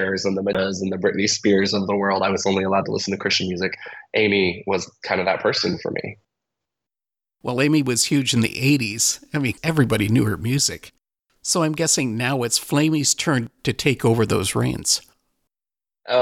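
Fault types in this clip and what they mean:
CD skip: at about 0.53 s the laser lost its track and landed on a different turn of the disc's spiral, so the player briefly fell silent and resumed from another point in the audio. The gap is tiny, roughly 15 ms, heard as a tick followed by a discontinuity. On a waveform it appears as a short flat stretch with abrupt edges. On a spectrogram it shows as a thin vertical broadband click line beside a narrow blank slot.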